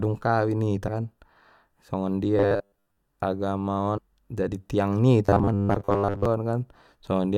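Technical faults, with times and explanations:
0.87 s, 2.54 s and 3.97–3.99 s, compressed frames skipped: the audio jumps forward abruptly, losing about 150 ms at the first two points and about 300 ms at the third. The jump sizes fit whole runs of 21.3 ms frames, about seven and about fifteen of them, that were never decoded.
2.37–2.97 s and 5.25–6.25 s, robotic sound from repeated short buffers: the sound turns into a stiff metallic buzz at 100 Hz that still loosely tracks the original contour. The likely cause is that new audio arrived too slowly, so playback filled the gap by replaying the last short buffer over and over. That repetition covers most of each stretch, and the 100 Hz pitch fits a buffer about 10 ms long. The skip at 2.54 s falls inside the first of these stretches.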